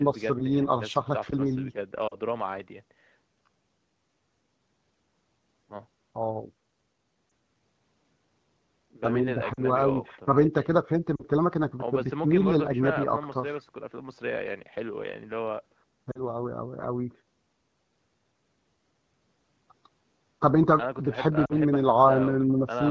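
Lost AMR speech frames break up the speech at 2.07–2.15 s, 7.29 s, 9.53–9.61 s, 11.16–11.23 s, 16.11–16.21 s and 21.45–21.53 s. Each gap is about 40 ms, consistent with two 20 ms frames, except the single-frame loss at 7.29 s. Frames failed their checksum, so the AMR-WB decoder, running at 12.65 kbit/s, repeated the last good pitch and vocal-tract parameters at reduced gain. The single lost frame is heard as a brief dip or warble, the two-frame losses drop to near silence, and the speech returns weak or rough for a moment.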